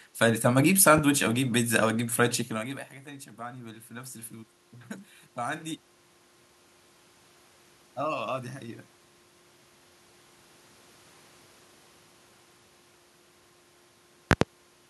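At 0.98 to 1.01 s a loud pop cuts through the speech: a single sharp click standing roughly 10 dB above the surrounding level, with the talking continuing underneath. On a waveform it shows as one isolated spike, and on a spectrogram as a thin vertical stripe spanning the whole frequency range. It is likely a brief voltage transient, from a connector, switch or static discharge, entering the signal chain.

From 1.32 to 4.59 s the automatic gain is rising. The control judged the input too quiet and lifted its gain gradually by 6 dB, so the speech and the room noise swell together over about three seconds. The waveform envelope widens steadily across that span, and on a spectrogram the background noise floor brightens along with the speech. That simultaneous rise is what separates it from the talker's change of distance near 2.5 s.

At 14.31 to 14.45 s a second loud pop arrives as two quick thumps in succession, around 15 dB above the signal. 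They appear as a pair of closely spaced spikes on the waveform and two broadband vertical stripes on the spectrogram.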